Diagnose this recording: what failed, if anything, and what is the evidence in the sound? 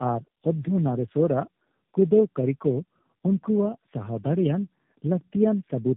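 The failure is tandem speech coding, at the codec stage. It runs through the whole clip. The speech is rough, muffled and warbly, and nothing is left above 3.8 kHz. The damage sounds stacked. It points to about three low-rate speech coders in a row, such as G.729A twice and then AMR-NB. Each link decoded the speech and coded it again. Each coder then worked on the previous coder's errors. The artefacts compound at every border.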